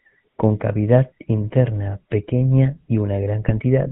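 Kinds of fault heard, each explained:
GSM full-rate codec: Throughout, the speech has a buzzy, gravelly roughness and nothing above 4 kHz, a pulse-driven vocal-tract model at 13 kbps rather than smooth band-limiting.
GSM bit errors: From 3.48 to 3.51 s, just after "interna pequeña y", corrupted decoder values produce a brief squawk and gargle, a sudden spectral distortion rather than a silent dropout.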